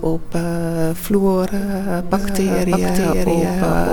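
From 2.14 s to the end, a doubled audio track appears. A second full-band copy enters abruptly, about 0.7 s behind and roughly as loud as the original. It has no decay or room colour. A slower second capture path is the likely cause.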